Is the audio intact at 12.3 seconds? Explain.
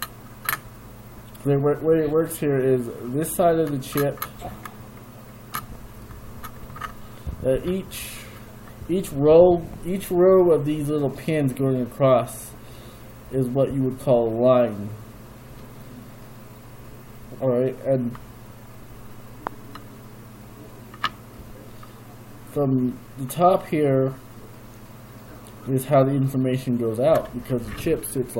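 Yes, the audio at 12.3 seconds is intact, with no dropout, click, distortion or other fault at that moment.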